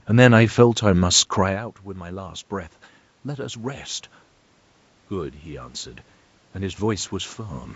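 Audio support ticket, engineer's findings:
Level dips around 1.5 s as the talker moves back, then voice and room noise swell together from 1.46 to 3.91 s. Automatic gain rising: the AGC sees input about 16 dB quieter and ramps up about 4 dB over roughly 2.5 s, lifting the background with the voice. Band-limited to 8 kHz by the call mic processing.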